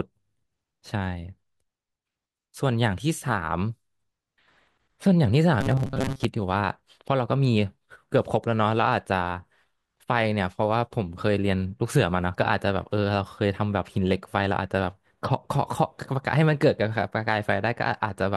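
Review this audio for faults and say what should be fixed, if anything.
From 5.61 to 6.26 s a metallic 134 Hz buzz is imposed on the speech: robotic sound from repeated short buffers, likely one 7.5 ms chunk looped. A larger jitter buffer or higher thread priority for the audio path would keep new audio arriving on time.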